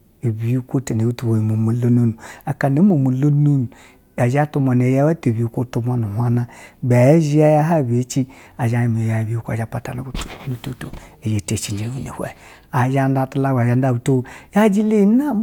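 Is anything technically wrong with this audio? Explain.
No, nothing technically wrong stands out here; it's just speech coming through the way it should, with nothing to flag.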